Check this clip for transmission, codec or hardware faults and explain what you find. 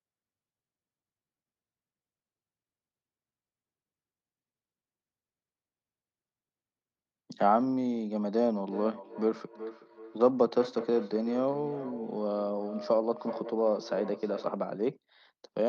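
One fault is present: a feedback echo between two devices, from 8.66 s to 14.65 s. A second device in the same room on the same call was playing the far end back out loud, and its sound reached the other microphone again. Each device's echo canceller removes only what that device itself plays, so the loop went uncorrected. The result is speech returning at a steady spacing of roughly 0.4 s, the repeats thin and ringing, peaking at about 13 dB below the speech.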